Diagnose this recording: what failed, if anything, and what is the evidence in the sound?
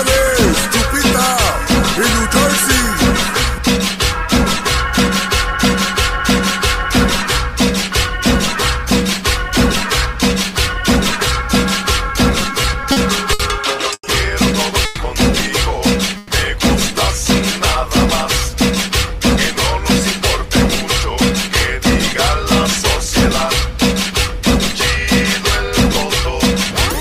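Between 12.32 and 14.04 s the audio stutters in repeated stalls, a network and jitter-buffer fault. Packets arrived slower than playout, so the buffer kept running dry, nine times in that span. Each gap was bridged by extending the last sound, about 250 ms in total, the longest gap 90 ms, roughly 15% of the stretch. Nothing is missing; the audio just drags. Unlike a freeze, it is a cluster of short hitches rather than one hold.

At 14.85 s and again at 16.17 s there is a call audio freeze: the sound hangs for about 130 ms, carried on as a fading buzz or hiss with no drop to silence, then picks up exactly where it stopped. The cause is likely packets held up on the network, emptying the jitter buffer at the receiver. Each event shifts playback about 130 ms later rather than deleting audio, which separates it from packet loss, where sound would be cut out.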